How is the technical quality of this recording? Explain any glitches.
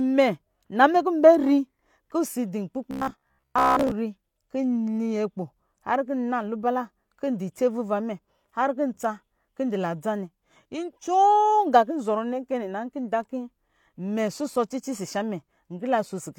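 One glitch stands out in the speech, lasting about a second.

Robotic sound from repeated short buffers runs from 2.91 to 3.91 s. The likely cause is new audio arriving too seldom, so playback keeps re-emitting the last short chunk while the real material is skipped. Around seven tenths of that stretch is repetition. The loop rate, 66.8 Hz, fits a chunk of roughly 15 ms, and it stamps a rigid, metallic buzz at that rate over the voice, tracking the original only loosely.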